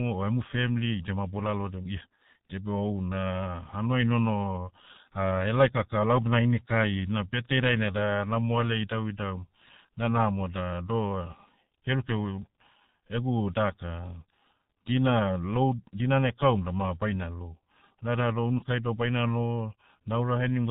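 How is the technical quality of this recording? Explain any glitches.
Pretty rough, honestly. The whole thing has gone through the G.723.1 codec, and it shows from start to finish. That's an old internet-telephony codec that chops the signal into 30 ms frames and rebuilds it from a slowly updated voice model, and the thinness here fits its 6.3 kbit/s mode. Nothing survives above 4 kHz, so the speech comes across muffled and hoarse, consonants smear together, and the damage is heavy throughout.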